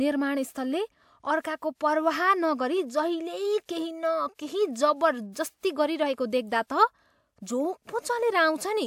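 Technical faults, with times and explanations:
3.66–3.69 s, pre-echo: a short hiss rises about 33 ms ahead of a sharp onset in the speech, and the attack itself arrives softened and smeared instead of crisp. A transform codec distributes quantisation noise across an entire block, so when a transient lands late in that block, noise scaled to the loud attack also fills the quiet stretch before it. The 33 ms spread matches that smear.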